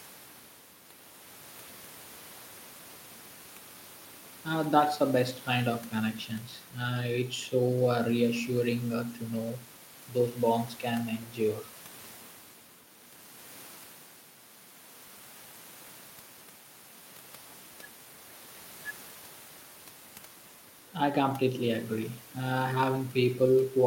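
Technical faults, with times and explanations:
No technical faults can be heard in this speech clip.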